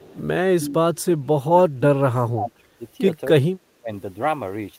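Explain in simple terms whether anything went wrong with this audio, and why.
Two problems can be heard in this speech recording.

Echo leak: from 0.0 to 0.17 s, and again from 0.96 to 1.02 s, a faint copy of the speech comes back about 0.26 s late. The likely cause is a loudspeaker on the far end whose echo canceller let part of the sound slip back down the line.

Speech suppressed in double talk: between 0.48 and 2.82 s the voice drops sharply, nearly to silence, for about two seconds in total, with a shorter, milder dip at 3.76 to 3.91 s. This likely happened because both sides spoke at once and the echo canceller turned down the talker along with the echo.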